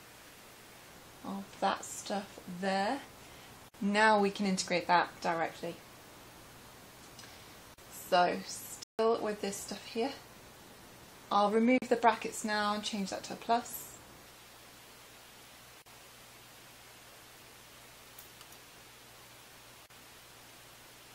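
A steady 60 Hz mains hum, roughly 35 dB below the signal, runs throughout, showing as a constant thin line at the bottom of the spectrogram. At 3.69 s a gap at a join of encoded pieces cuts in for about 55 ms, and similar 40 ms gaps follow at 7.74, 11.78, 15.82 and 19.86 s, every four seconds. The encoder's leading delay and end padding were left in, so the waveform drops to flat silence with smeared edges. At 8.83 s the audio halts for about 157 ms, most likely a playback stall from the player running short of data, seen as a flat stretch in the waveform.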